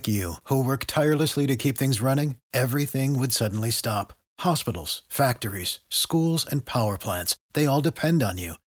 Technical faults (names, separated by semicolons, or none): none